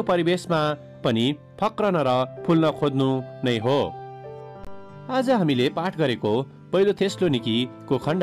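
At 4.65 s the sound drops into a short, hard-edged silence lasting until 4.67 s. It is a gap between stream segments. Two segments' timestamps leave about 21 ms uncovered, and the player fills it with silence. The stream uses 6 s segments. No audio is lost.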